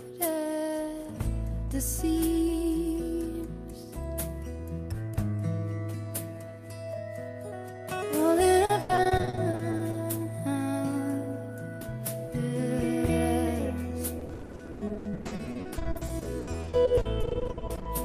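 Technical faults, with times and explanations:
8.65–9.95 s, repeated packet loss (robotic sound): choppy sound with holes up to 80 ms, each patched by stretching the last sound, covering about a third of the stretch.
14.19–17.87 s, repeated packet loss (robotic sound): longer robotic, broken-up passage; gaps up to 80 ms follow closely, refilled by repeating prior audio, concealing about 40% of it.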